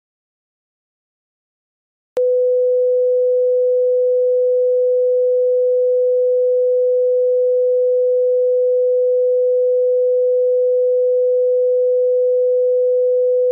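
Audio dropout to silence from 0.0 to 2.17 s: the clip opens in dead silence with no room tone, likely because the input was lost while recording continued, then sound cuts in mid-flow.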